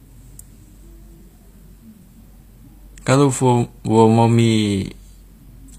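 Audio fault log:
Throughout, HE-AAC compression: s sounds come out gritty and metallic, the treble sounds bright but synthetic, and nothing is heard above about 15.5 kHz. The codec damage is plainly audible across the speech. The likely cause is an HE-AAC v2 encode at a low rate, which fits about 24 kbps. Only the lower spectrum is truly coded, and the treble is rebuilt by copying lower bands upward under a coarse envelope, so its harmonics fail to align with the original.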